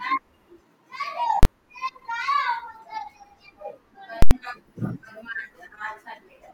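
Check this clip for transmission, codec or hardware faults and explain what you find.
Two faults stand out, both invalid numbers at full scale. From 1.43 to 1.45 s, fitting a 1024-sample block, a single bang replaces the speech. From 4.22 to 4.31 s, fitting a 4096-sample block, a loud pop at each edge frames a silent gap. A calculation yielded invalid values that locked the output at its extreme. Unlike clipping, which flattens peaks that still follow the speech, this holds a fixed level for the whole block.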